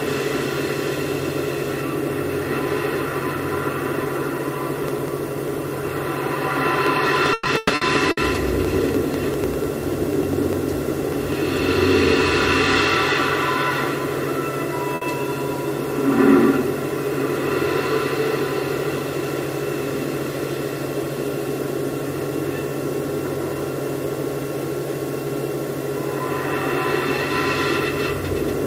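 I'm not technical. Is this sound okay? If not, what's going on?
No, there are three separate problems.

From 4.79 to 11.42 s you hear periodic USB or driver dropouts: a small tick roughly ten times a second, around 70 in all. Something on the computer briefly interrupts the audio connection on a fixed schedule, and each time about a thousandth of a second is skipped. Unlike the faults below, these are tiny and perfectly evenly spaced, so they sound like a steady ticking rather than broken-up sound.

Between 7.33 and 8.20 s, in the middle of that ticking, there is repeated packet loss, which gives a robotic sound. The audio travels in small chunks, and four times in that short stretch chunks went missing, the longest gap being 120 ms. Each time, the receiver stretched the last bit of sound to cover the hole, so about 40 percent of that stretch is filler. This makes the sound choppy and robotic. 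Unlike the ticks, the gaps are much longer.

At 14.95 to 15.04 s there is a single burst of packet loss. About 60 ms of audio never arrived, and the receiver covered it by holding the last sound briefly, which gives a short smeared moment before the audio jumps ahead. Unlike the robotic stretch, it happens only once and is over almost instantly, so it sounds like one small hiccup rather than a garbled passage.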